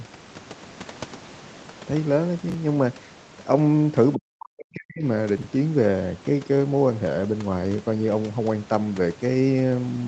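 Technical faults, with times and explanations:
2.50 to 2.54 s and 5.38 to 5.44 s, chunks out of order: each moment sounds briefly jumbled. A 20 ms slice of audio plays after the material that should follow it, one slot late at first and two slots late the second time.
4.15 to 5.04 s, speech suppressed in double talk: the speech sinks by roughly 40 dB, thinning and breaking up for about a second. This is likely an echo canceller confusing the talker with far-end echo while both sides spoke, and turning everything down.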